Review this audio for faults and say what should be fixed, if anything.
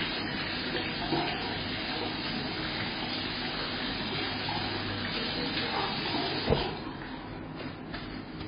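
Throughout, nothing is present above 5 kHz, and the sound is heavily watery and swirly, likely from MP3 compression at a very low bitrate, around 16 kbps. Encode at a higher bitrate or keep an uncompressed source.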